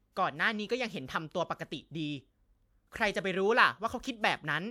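Speech recording with no audible technical faults anywhere.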